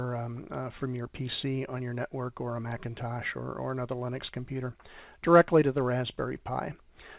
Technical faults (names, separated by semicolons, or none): short concealed packet loss